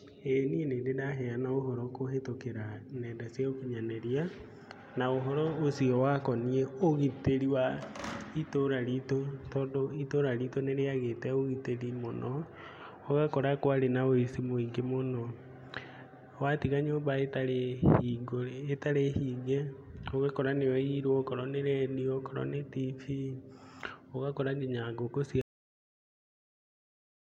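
Right at 25.41 s the speech just stops dead, a classic cut-off end. The final stretch of audio never got written out, so the sound is chopped mid-word with no natural decay, and it's flat digital silence from there to the end.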